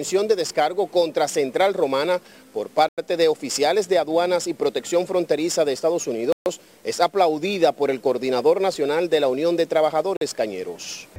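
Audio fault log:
2.89–2.98 s, 6.32–6.46 s, 10.17–10.21 s: Bluetooth stall, silent gaps of 92, 136 and 47 ms, likely from the headphone buffer running dry while delayed packets were resent; they show as flat waveform gaps and blank vertical spectrogram bands.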